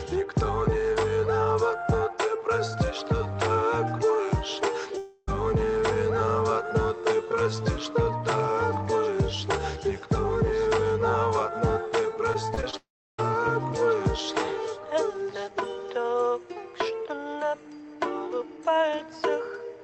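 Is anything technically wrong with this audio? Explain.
Yes. From 4.97 to 5.29 s, the sound drops out and is replaced by a fading buzz, likely a long network dropout. The receiver stretches the last sound across the missing 0.3 s.

From 12.33 to 12.75 s, there is repeated packet loss with a robotic sound. Four short holes, the longest 26 ms, are patched in quick succession. The result is choppy, with pieces missing.

Right after, from 12.77 to 13.20 s, what is likely a second long network dropout occurs. A brief buzz fades into about 0.33 s of silence. The sound then resumes with that part missing.

The call codec's band limit holds throughout: nothing is present above about 8 kHz.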